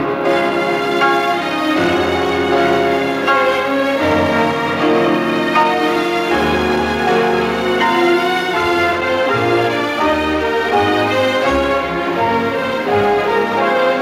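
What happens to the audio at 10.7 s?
Nothing goes wrong at 10.7 s; the audio plays through that moment intact, with no dropout, click, glitch or other fault.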